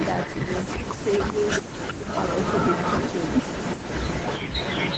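Speech with two faults: an echo canceller on a loudspeaker side likely let its pickup leak back, so an echo leak trails the voice by 392 ms, roughly 5 dB down, throughout the clip. During double talk, that canceller likely also clamped this talker, so the speech suppressed in double talk shows as a slight dip at 0.45 to 0.5 s, a deeper one of about 10 dB at 0.79 to 0.99 s, and a near-total dropout at 1.62 to 1.66 s, all within the call path's band limit of 8 kHz.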